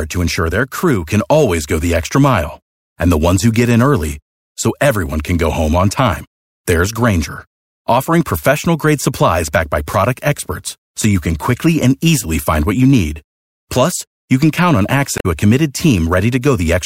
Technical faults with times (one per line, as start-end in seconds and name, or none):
15.17-15.26 damaged data in a compressed stream